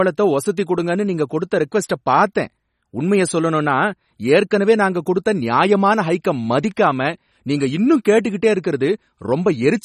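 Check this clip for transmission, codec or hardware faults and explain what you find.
One codec fault runs through the whole clip: the speech carries plainly audible MP3 compression artefacts, most likely from an MP3 encode at a low bitrate, roughly 32 kbps. Nothing is present above 14.6 kHz, where the encoder cut the treble outright. Below that, weak frequency lines drop in and out from frame to frame, so the speech sounds watery and swirly, with chirpy, metallic s sounds and softened consonant attacks. That flickering texture sets it apart from a simple low-pass filter, which would only dull the top end.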